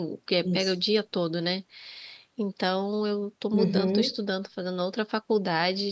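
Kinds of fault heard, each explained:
No fault can be heard in this speech clip. It has passed through call microphone processing, so the lowest bass is filtered away and nothing sits above 8 kHz, which is the normal behaviour of that path.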